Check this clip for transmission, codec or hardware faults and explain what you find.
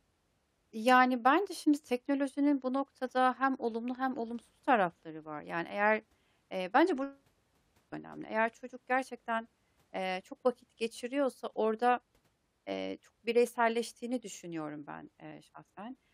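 Nothing here points to a problem, and the speech comes across steadily all the way through with nothing that stands out as a fault.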